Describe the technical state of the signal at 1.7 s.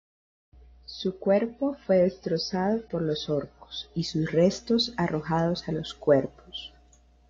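At 1.7 s you're still inside the low-bitrate start of an adaptive stream, which runs from the top to 4.0 s. The player grabbed a cheap rendition first; the speech has nothing above 6 kHz and heavier codec smearing, which fits roughly 24 kbit/s AAC, before snapping cleaner at 4.0 s.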